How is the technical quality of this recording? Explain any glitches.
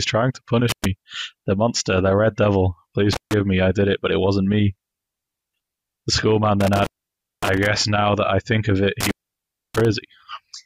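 Four dropouts from an intermittent contact mar the recording, at 0.69–0.85 s, 3.13–3.34 s, 6.61–7.66 s and 9.01–9.85 s. A loose connection briefly opens the signal path for about 103 ms, 144 ms, 562 ms and 637 ms respectively. The sound cuts out with crackle at each edge, leaving faint hiss during the gaps.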